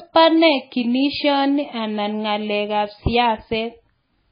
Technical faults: MP3 compression

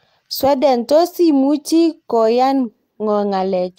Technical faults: none

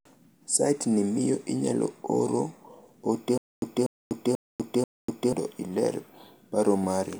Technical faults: stutter with silent gaps

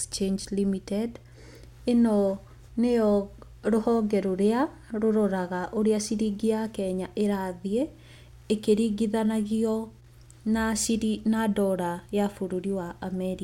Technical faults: mains hum

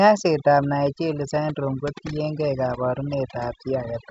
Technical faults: overdone noise removal

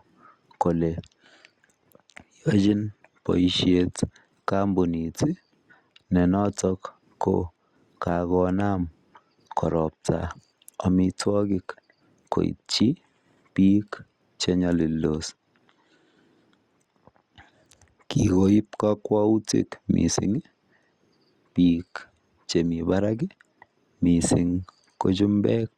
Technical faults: none

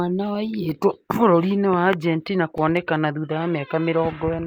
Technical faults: CD scratch ticks

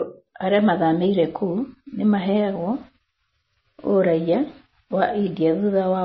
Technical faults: MP3 compression

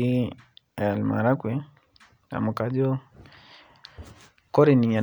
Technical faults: none

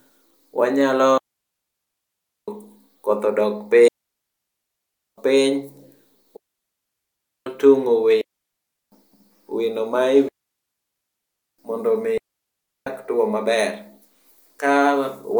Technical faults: digital wireless dropout

